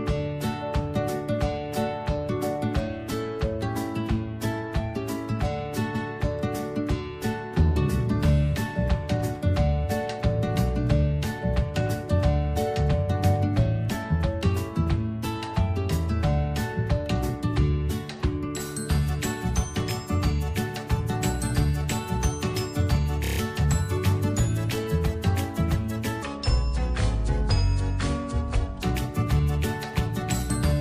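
At 5.94 s and again at 23.24 s, repeated frames cause stutters. First, a 139 ms block plays twice. Later, a 19 ms block repeats five extra times. On a waveform, each repeat appears as identical copies.

From 26.23 to 28.82 s, a section at the wrong speed plays at 0.644 times normal, dropping pitch about seven semitones. The likely cause is a mismatched clock. The spectrogram shows harmonics shifted lower and stretched in time.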